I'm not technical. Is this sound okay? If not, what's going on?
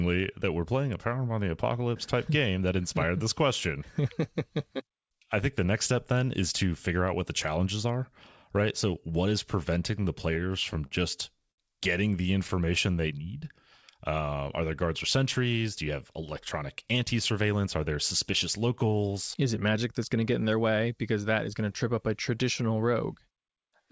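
No. Between 9.92 and 11.61 seconds the speech catches and stutters, with nine tiny hitches in under two seconds. These are repeated stalls (stutter). On a call, sound travels in small packets, and here they kept arriving late. Each time the receiving end ran out, it stretched the last bit of sound to cover the wait. The longest wait was 67 ms, and the filler adds up to 183 ms. Nothing is actually lost, but the speech drags and jerks.

Right after, from 12.23 to 13.38 seconds, the speech slows to about 94% of normal speed without dropping in pitch. Sounds come out drawn out, and there may be a faint wobble. This is a jitter buffer slow-down. The jitter buffer is a small holding area that keeps a cushion of sound ready to play. That cushion was running low or needed to grow, so the system repeated tiny slices of sound to rebuild it, adding 86 ms in total.

From 15.57 to 17.67 seconds the opposite happens. 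The speech runs about 5% fast, still at normal pitch, and can sound slightly hurried. This is a jitter buffer speed-up. By then too much sound had piled up in the holding area, probably because delayed packets arrived all at once. To catch up, the system snipped out tiny slices, roughly 150 ms in total, so the conversation wouldn't lag.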